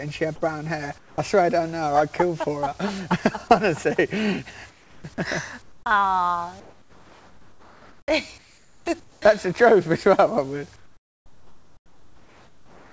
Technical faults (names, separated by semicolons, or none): comfort noise in place of the background